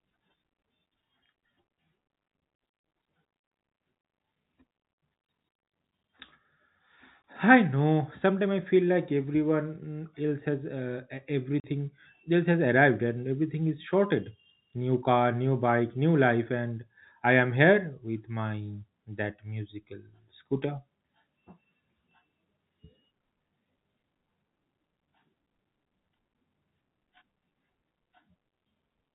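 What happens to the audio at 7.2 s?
At 7.23 s, just before "I know", the speech drops out for a brief instant: a hole of about 20 ms of dead silence with hard edges at both ends. This is packet loss filled with silence. A chunk of the stream never arrived, and the receiver played silence in its place instead of concealing the gap. The length fits a single lost 20 ms packet from the G.711 telephone coding carrying the call.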